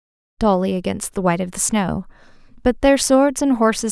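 No technical faults can be heard in this recording.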